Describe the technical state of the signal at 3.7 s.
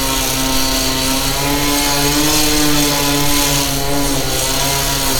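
At 3.7 s the signal is intact, with no audible fault at that moment.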